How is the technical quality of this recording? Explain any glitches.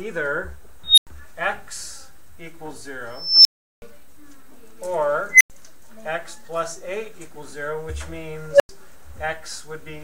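The technical quality is poor. Four bursts of unstable filter ruin it. Each is a tone that swells to a clipped squeal and then drops to silence, because a recursive filter with bad coefficients grows until it overflows and resets:
0.84 to 1.07 s, a tone near 4 kHz building over 139 ms, then 93 ms of silence;
3.12 to 3.82 s, near 5 kHz, building over 326 ms, then 372 ms of silence;
5.30 to 5.50 s, near 2 kHz, building over 105 ms, then 93 ms of silence;
8.51 to 8.69 s, a lower tone near 500 Hz, building over 93 ms, then 93 ms of silence.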